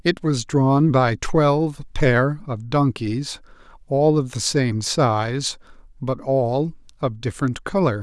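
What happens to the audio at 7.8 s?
At 7.8 s the audio is intact, with no dropout, click, glitch or other technical fault to be heard.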